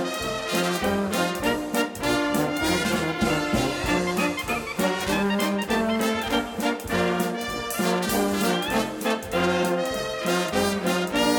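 No dropouts, clicks, distortion or other defects turn up anywhere in the recording.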